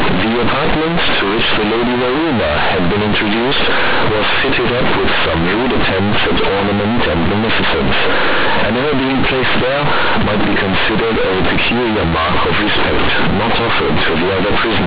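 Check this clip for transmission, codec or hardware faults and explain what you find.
There is one fault, and it runs through the whole speech clip: companded audio read as linear. The mu-law G.711 bytes are being played as plain 8-bit linear samples with no expansion step. Every sign change therefore throws the output across roughly half its range, and quiet passages come out as loud as loud ones. The result is harsh, buzzy distortion at high level, with heavy noise filling the pauses. The 8 kHz telephone coding underneath is intact, so the band still stops at 4 kHz.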